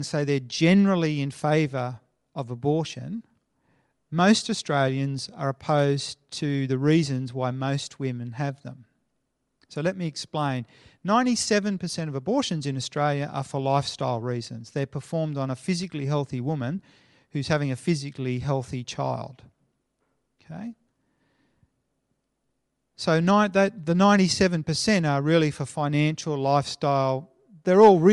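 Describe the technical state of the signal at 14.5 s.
Dropped samples at 14.51 s: a fraction of a millisecond of the stream is missing, so the waveform jumps abruptly from one value to a later one. No sound is lost, but the discontinuity produces a single sharp click, likely from a tiny gap in the sample stream.

At the same moment, Bluetooth LC3 compression colours the speech, as it does throughout. Its coarse quantisation strips upper-spectrum detail and fills it with noise, leaving a plainly audible breathy, grainy edge that fits short frames at a modest bitrate, likely from an LE Audio link.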